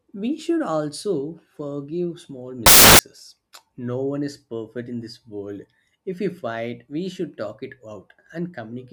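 Speech clip with one nasty spot: from 2.66 to 2.99 s it turns into loud, harsh broadband noise, a classic case of samples built from the wrong bytes. The reader's misassembling each sample, so the jittery low bits land in the high positions and swamp the speech for about a third of a second.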